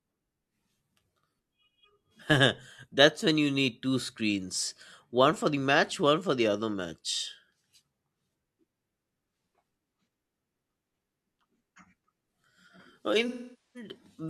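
At 13.28 s, near the end of the speech, AAC frame loss with concealment sets in and lasts until 13.89 s. About 470 ms of coded audio never reached the decoder, which fits a run of roughly eleven lost frames. The decoder bridges the gap by reusing the last good spectrum with altered phase and energy. The result is a smeared, noisy stretch that loses detail and sinks toward quiet before normal audio returns.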